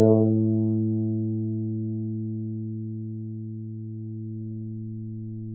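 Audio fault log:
No faults found; the call microphone processing sounds as expected.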